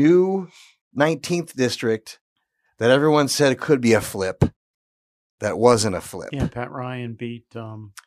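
No technical faults can be heard anywhere in this speech recording.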